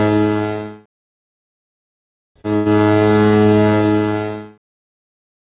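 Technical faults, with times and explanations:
2.56–2.77 s, short stall from a late packet: the jitter buffer ran dry, so the last sound was held for 95 ms with nothing lost, leaving a smeared, repeated stretch on the spectrogram.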